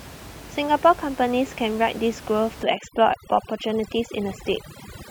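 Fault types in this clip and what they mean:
Overdone noise removal: from about 2.63 s to the end, the noise reducer is cranked so hard it kills any band near its noise estimate. The room noise, about 17 dB under the speech, drops and breaks up into twinkly specks.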